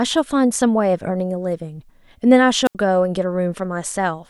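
A wireless microphone squelch dropout occurs at 2.65 to 2.75 s. The analogue FM link's radio signal fades until the receiver's squelch shuts the output, so a short burst of hiss gives way to about 78 ms of near silence before the speech returns.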